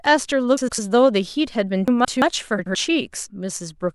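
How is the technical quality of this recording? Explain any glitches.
The speech is disrupted by three brief ordering glitches, two of one kind and one of another.

Between 0.57 and 0.79 s, and again between 2.58 and 2.75 s, the sound briefly turns into a garbled flutter. These are frames out of order: two adjacent runs of frames were decoded in swapped sequence, so each short stretch plays with its halves exchanged. The swapped blocks last 104.5 ms in the first case and 78.4 ms in the second, which fits runs of four and three frames. Nothing goes missing, and each stretch has three joins.

From 1.88 to 2.22 s there is a jumbled moment. This is chunks out of order: one 170.67 ms chunk arrived or was written a single chunk late, so it plays after the chunk that should have followed it. All the audio is still present, but its sequence is wrong, and each of the three splice points is a hard join.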